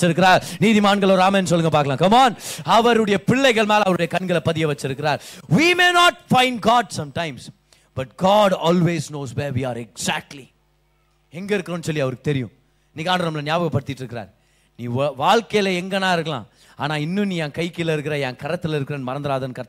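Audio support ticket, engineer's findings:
No faults found in this clip. No issues to report against any component.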